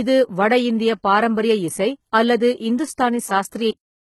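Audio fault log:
throughout: HE-AAC compression. The treble sounds synthetic, with sibilants coming out gritty and lispy. That's likely HE-AAC v2 at around 16 kbps, where only the low band is really coded and the top end is rebuilt by copying lower bands upward, so the harmonics don't line up.
3.71 s: cut-off end. The speech just stops mid-sound at 3.71 s and drops straight to digital silence, with no decay at all. The final buffers never got written or played, so the sound is chopped off rather than ending naturally.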